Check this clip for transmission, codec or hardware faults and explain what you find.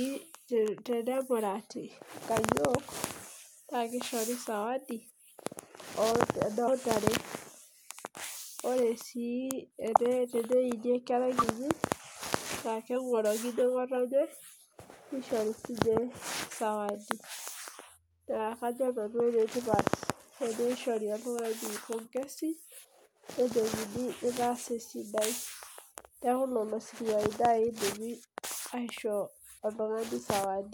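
The speech has one codec fault, compressed frames skipped, occurring three times: at 6.67 s, from 9.92 to 9.98 s, and from 11.38 to 11.48 s. Whole compressed frames never reach the output, so the speech jumps forward, by roughly 70 ms at the first point and about 20 ms at the other two. A dropout would leave a silent gap, but these joins lose material.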